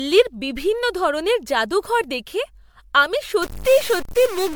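Generation loss runs through the whole speech clip, from 0 s to the end. The swirling, hollow texture and smeared consonant attacks point to MP3 at around 96 kbit/s, most likely decoded and re-encoded about four times. Each pass quantises again on a shifted frame grid, so the noise and spectral gaps stack up and sound worse than a single encode at that rate. The band still reaches about 20.1 kHz, so the damage is smearing rather than dullness.

A stuck bit appears from 3.42 s to the end at 4.56 s. The quiet gaps fill with noise. The likely cause is one data bit held at a fixed value by a faulty line or converter. Samples whose true bit differs are pushed off by that bit's weight, in a pattern that follows the waveform, and the offset flips with the sign of small values, so near-silence becomes noise.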